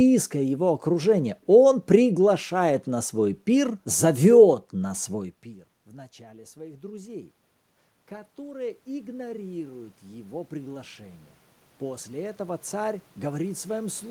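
The voice and the room noise behind it swell together three times: from 5.09 to 7.32 s by about 4 dB, from 8.09 to 11.27 s by about 7 dB, and from 11.79 s to the end. This is automatic gain rising. After the talker moved away near 5 s and the input fell by about 23 dB, the gain control kept lifting its level gradually.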